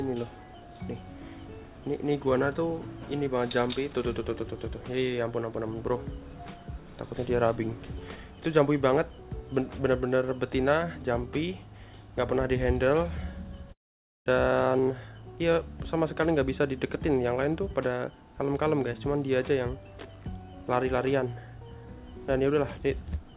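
At 13.72 s the audio breaks off. The last sound carries on for a moment as a brief, fading buzz or hiss, then gives way to about half a second of silence before the audio returns at 14.28 s, with roughly 540 ms of the original never heard. This is likely a long network dropout: packets stopped arriving, and the receiver's concealment filled the gap before muting. Throughout the clip nothing is heard above 4 kHz, which fits a G.711 mu-law call codec.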